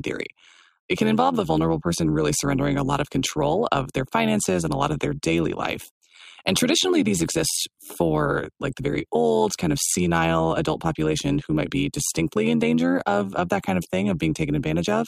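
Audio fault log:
Throughout: overlap-add ripple. The speech carries a metallic buzz with extra tones around the voice, as the level swells and dips around 100 times a second with a depth of about 11 dB. It comes from windowed frames being rejoined with an overlap whose gains do not add up evenly, so the level sags once per frame. Unlike ordinary tremolo or amplitude modulation from a gain stage, the wobble rate is tied to the frame rate, not to any musical or effect setting.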